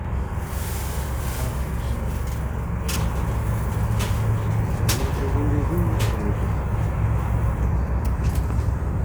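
From 0.0 to 2.96 s, channel delay (doubling): one channel runs about 46 ms late, fitting a 2048-sample buffer, so the mono sum gives an equal-level slap. That's too long for comb filtering and too clean for reverb.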